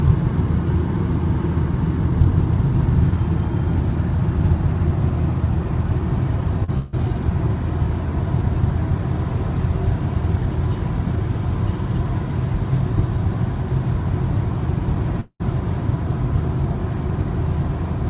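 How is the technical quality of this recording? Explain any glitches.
The recording has three packet-loss glitches. Its band stops at 4 kHz, as the G.711 mu-law call path passes nothing higher.

At 6.64 to 6.70 s there is short concealed packet loss. About 40 ms of audio failed to reach the decoder in time, and the receiver bridged the hole by extending the preceding sound before rejoining the real signal. You hear a brief smear or wobble.

Right after, from 6.78 to 6.94 s, comes a burst of packet loss. Roughly 140 ms went missing in a row, and the receiver stretched the last sound across the whole gap while turning it down, with no silence. The result is a fading held buzz or hiss, then the audio resumes further along.

At 15.20 to 15.42 s the sound is replaced by a fading continuation of what came before, about 190 ms of it, ending in roughly 80 ms of silence before the audio returns with about 200 ms gone. 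This is likely a long network dropout, where incoming audio briefly stopped altogether.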